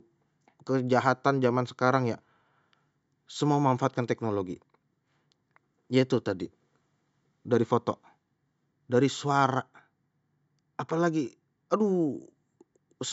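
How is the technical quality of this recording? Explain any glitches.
No glitches; the speech comes through as intended.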